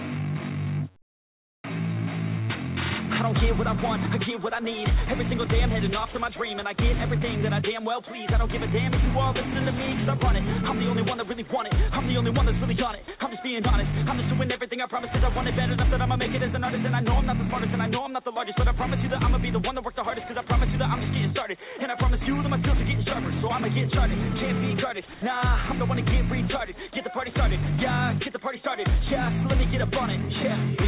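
The audio comes over a call line, with nothing above 4 kHz, which fits G.711 A-law. From 1.02 to 1.64 s the real background, sitting about 36 dB under the loud parts, gives way to a flat, featureless hiss that jumps level by about 10 dB. Then at 25.14 to 25.22 s there's a shorter 80 ms patch where the change is only about 1 dB. That's comfort noise in place of the background, likely from discontinuous transmission, where the sender goes quiet and the receiver fills in synthetic noise. Around 13 s there are two tiny gaps, 13.04 to 13.08 s and 13.18 to 13.2 s, where about 20 ms and then 10 ms of actual sound get swapped for that same steady noise. That looks like sound dropped by the voice detector: it likely mistook a quiet stretch for background, stopped sending, and picked up again a moment later.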